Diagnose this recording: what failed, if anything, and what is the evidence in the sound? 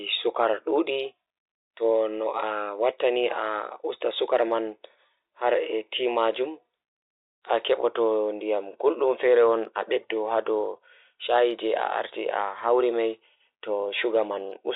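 Nothing stood out on listening to this speech recording beyond the narrow band of its G.711 telephone coding, which tops out below 4 kHz as that format should.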